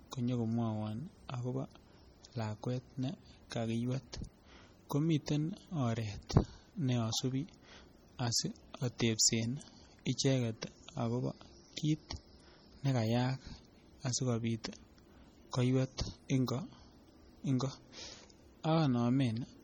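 Throughout the speech, a watery, swirling texture with smeared consonants and nothing above about 19.7 kHz, heavy damage that fits likely MP3 compression at around 32 kbps. At 8.98 s, a brief hiss runs about 18 ms ahead of an attack, which sounds softened: pre-echo, where quantisation noise spreads across the coding block before the onset.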